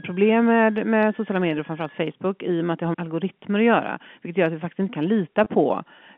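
Speech over a telephone line, with the narrow band you'd expect from G.711 coding, and two faults. From 0.0 to 2.0 s, right before "i och med att", there's a switching supply whistle: a thin tone wandering between about 1.56 and 1.75 kHz, sitting roughly 30 dB under the speech. That's a power supply running in an audible burst mode or beating against another one. Then at 5.44 to 5.46 s, just after "vi faktiskt inte kan", there's packet loss with pitch repetition. About 20 ms went missing, which sounds like a single dropped packet, and the receiver covered it by repeating the last pitch period, so you hear a brief held, buzzy note.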